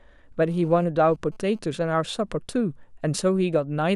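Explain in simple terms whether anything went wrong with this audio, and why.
From about 0.49 to 1.59 s there's GSM phone buzz, a harsh, raspy rattle behind the speech. A nearby 2G phone sending data pulsed its radio about 217 times a second, and the audio circuitry picked those pulses up as sound.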